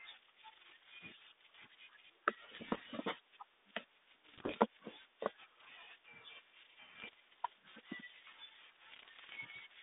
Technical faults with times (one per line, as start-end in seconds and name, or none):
2.54-2.85 bit errors on an ADPCM link
3.09 dropped samples
4.28-4.56 bit errors on an ADPCM link
6.97-7.14 bit errors on an ADPCM link
8.92-9.39 bit errors on an ADPCM link